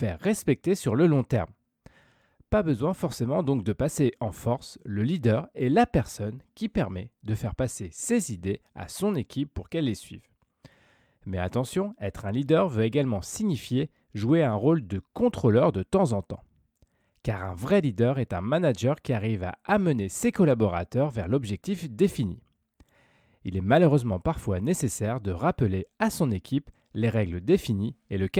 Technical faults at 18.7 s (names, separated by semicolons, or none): none